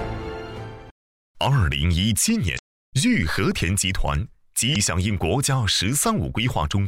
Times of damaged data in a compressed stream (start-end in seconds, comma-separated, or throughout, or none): 2.55-2.59, 4.72-4.76